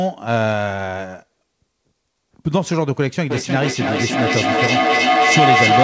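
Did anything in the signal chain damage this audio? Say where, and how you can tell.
Yes. From 3.3 s to the end, an acoustic loop between two devices on the same call causes feedback howl. Each trip from loudspeaker back into microphone gains level, so the repeats grow into a tone near 700 Hz. The loop repeats about every 300 ms and the howl reaches about 5 dB above the speech.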